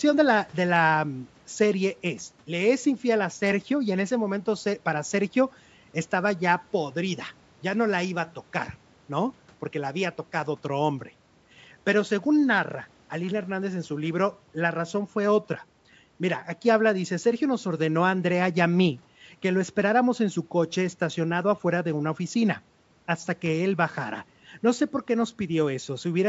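Nothing here counts as a fault: the speech carries the ordinary marks of a call's microphone processing, with the lowest bass trimmed away and nothing above 8 kHz, and that's just how such a path normally sounds.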